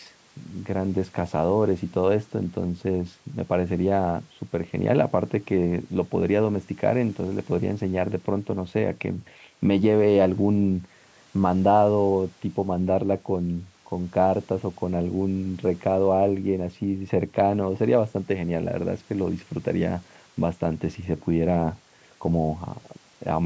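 Nothing goes wrong in this speech recording; it's just the usual call microphone processing, which trims the deepest bass and leaves nothing above 8 kHz, and that's exactly what a call should sound like.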